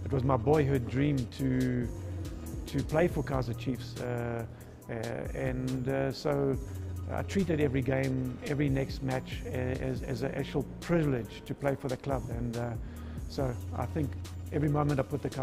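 Throughout, the audio was split into windowed frames and rejoined with an overlap whose gains do not add up to a constant. The level dips and swells by about 6 dB once per frame, around 200 times a second, giving overlap-add ripple: a metallic buzz.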